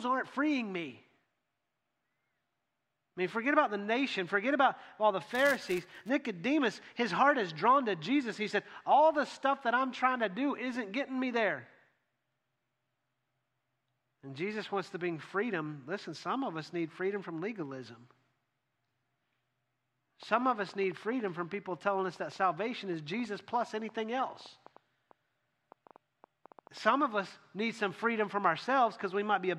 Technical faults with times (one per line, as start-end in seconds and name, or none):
5.29-6.09 filter restarted on every block
20.23-26.78 train of clicks